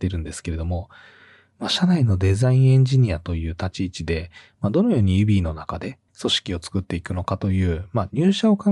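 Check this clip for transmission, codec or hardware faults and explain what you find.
No faults turn up anywhere in this speech recording. There is nothing to report from any point in it.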